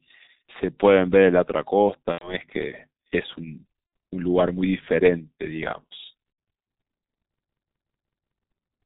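Throughout, the speech carries heavy G.723.1 codec damage: a low-rate telephony coder near 6.3 kbit/s leaves it muffled and hoarse, with a spectrogram empty above 4 kHz and smeared consonants.

At 2.12–2.37 s, 3.86–3.92 s and 6.32–6.38 s, VoIP packet loss concealed by the speech codec fills gaps of about 90, 60 and 60 ms, which fits three, two and two lost 30 ms frames. The decoder extrapolates a stretched, fading sound, seen as a shrinking waveform envelope.

From 7.43 to 8.36 s, a system hang loop replays one 185.76 ms chunk five times, which fits an 8192-sample buffer. It is a 5.38 Hz stutter, visible as identical repeating waveform blocks and vertical seams in the spectrogram.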